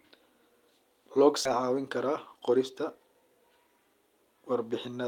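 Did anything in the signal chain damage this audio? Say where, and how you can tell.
Yes. In the network and jitter buffer stage, a skip ahead at about 1.45 s dropped roughly 400 ms of speech while later packets were already queued. Playback leaps straight across with no filling silence, so the speech on either side is spliced almost directly.

From 1.63 to 3.29 s a jitter buffer speed-up followed: holding too much audio, the receiver trimmed short pitch-period pieces again and again, removing around 150 ms. The speech runs at 107% speed with unchanged pitch, sounding slightly hurried.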